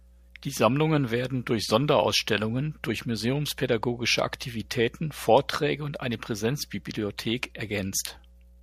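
Mains hum at 60 Hz runs beneath the speech from start to finish, fairly audible though well below it, and a spectrogram shows a steady horizontal line near the bottom.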